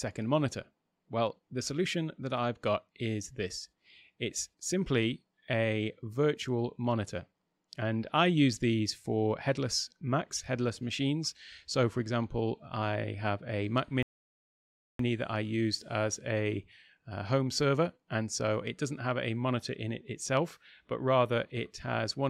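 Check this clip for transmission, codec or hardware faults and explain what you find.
One transmission fault is present: a rebuffering stall from 14.03 to 15.00 s. The player exhausted its store of downloaded audio and had to halt playback until the next portion of the stream arrived. The sound drops abruptly into silence for about 0.97 s, then picks up at exactly the point where it broke off. No material is skipped or repeated, but that gap lengthens the clip by nearly a second.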